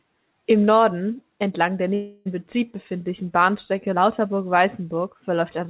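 A long network dropout runs from 1.94 to 2.27 s. The speech gives way to a buzzy, smeared continuation of the last sound that fades over about 0.31 s, then resumes with 0.32 s of audio gone, likely because packets were lost in transit. The clip is band-limited with nothing above 4 kHz, which fits G.711 mu-law on a call path.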